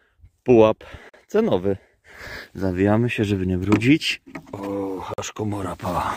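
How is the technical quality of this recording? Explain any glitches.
Two brief silences break the recording, at 1.09 to 1.14 s and 5.14 to 5.18 s. Each is a gap between stream segments: the 2-second segments' timestamps leave a hole that playback fills with silence, adding about 43 and 46 ms. Unlike a dropout, nothing is lost. The sound stops abruptly and resumes exactly where it left off.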